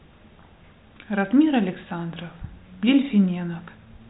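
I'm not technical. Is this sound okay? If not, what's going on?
Yes, there is nothing wrong with this speech recording. It has passed through G.726 ADPCM phone coding at its best setting, so it has the slightly muffled sound of a phone call, with nothing above about 3.8 kHz.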